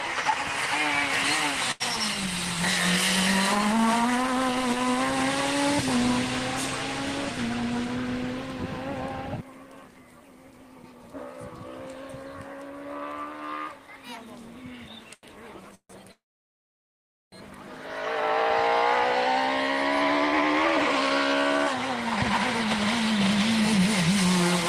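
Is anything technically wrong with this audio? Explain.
Yes, the audio has timing faults.

Short stalls from a late packet, at 1.71 to 1.82 s and 15.14 to 15.25 s. The jitter buffer ran empty, so the last sound was held for about 87 ms until the audio resumed.

Call audio freezes, at 15.75 to 15.91 s and 16.11 to 17.34 s. The sound stretches into a fading buzz, then drops to silence for 80 ms and 1.13 s. This is likely from packets delayed in transit.

Jitter buffer speed-up, from 19.95 to 23.79 s. Short pitch periods were cut repeatedly to reduce the built-up delay. The audio plays 2% faster at the same pitch, losing about a tenth of a second overall.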